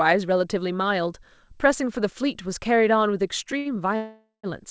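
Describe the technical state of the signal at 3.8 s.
Right at 3.8 s the short stall from a late packet (3.58–3.77 s) ends. Sound is held about 70 ms, then resumes intact, unlike a loss, which skips audio.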